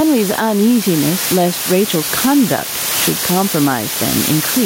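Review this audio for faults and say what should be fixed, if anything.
Low bit depth with dither runs throughout. Only 5 bits carry the speech. Rounding error becomes a steady, even hiss, roughly 10 dB below the signal. Record and export at 16 or 24 bits.

Gain pumping is present throughout. The gain swings around 10 dB. Likely cause: excessive input gain driving a fast limiter. Lower the input gain and relax the limiter.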